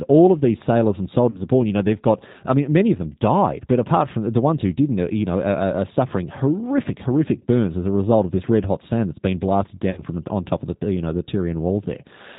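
It's speech run through the G.729 codec the whole way: nothing above 4 kHz, and a rough, slightly synthetic edge that sounds like the 8 kbit/s mode. There's also VoIP packet loss concealed by the speech codec at 1.30 to 1.43 s and 9.91 to 10.00 s. The decoder stretches its last pitch and filter into a fading buzzy tone or coloured noise, covering about 40 ms (likely two 20 ms packets) and then 60 ms, with weak audio lingering briefly afterwards.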